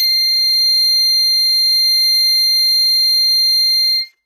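HE-AAC compression throughout the music: plainly audible damage, with nothing above 14.9 kHz and a metallic, gritty treble that is likely rebuilt from lower bands at a very low bitrate.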